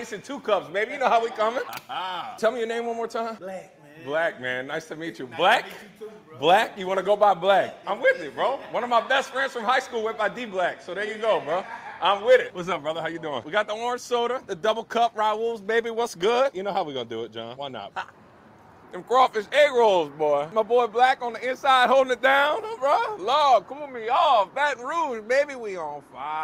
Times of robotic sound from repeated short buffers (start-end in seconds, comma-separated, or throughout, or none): none